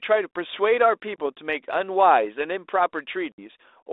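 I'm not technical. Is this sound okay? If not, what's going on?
No. There is packet loss on an ADPCM call. Audio drops to silence at 1.16–1.20 s (about one packet) and 3.32–3.42 s (about three). After each gap the receiving phone has lost track of the sender, so speech returns slightly distorted for a moment before settling.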